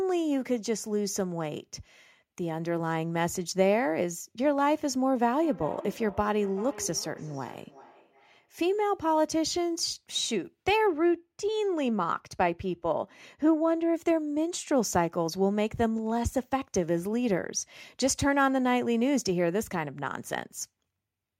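From 5.36 to 8.73 s there is feedback echo between two devices. A second device in the room replays what the first device's microphone sent, and that microphone picks it up again. Each syllable returns roughly every 0.4 s, thinner and ringing, peaking about 17 dB below the speech. The spectrogram shows faint, regularly spaced copies trailing each burst.

From 10.87 to 13.94 s de-emphasis is applied wrongly. A treble cut meant to undo pre-emphasis hit audio that had none, or was applied twice, so the top end is about 8 dB down at 10 kHz relative to 1 kHz and the speech turns dull and muffled. A spectrogram shows the upper band visibly darker across that stretch.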